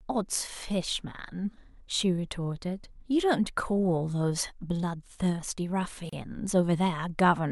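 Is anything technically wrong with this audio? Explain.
Yes. At 6.09 to 6.13 s the speech drops out for about 32 ms. This is a gap at a join of encoded pieces. Separately encoded segments were spliced without trimming encoder delay and padding. The silence has smeared edges, then speech resumes where it stopped.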